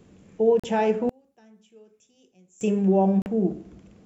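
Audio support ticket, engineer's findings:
Packet loss on the wireless link, likely a Bluetooth dropout. Two audio packets missed their delivery window and were discarded, leaving a 41 ms hole of silence at 0.60 to 0.64 s, with speech resuming mid-stream as though it had continued underneath.

Same Bluetooth dropout recurs at 3.22 to 3.26 s. Another 41 ms gap, again consistent with two lost packets, with the speech picking up further along rather than where it cut.

Polarity flip on one stereo channel, likely one channel inverted, 1.09 to 2.61 s. In the mono sum the shared centre content cancels and the speech falls by about 32 dB to a faint residue, then returns at full level.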